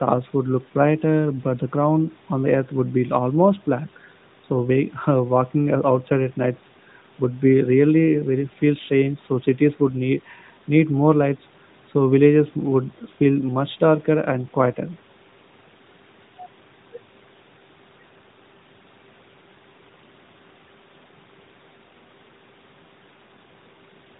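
Listening through the speech, nothing stood out as a technical fault.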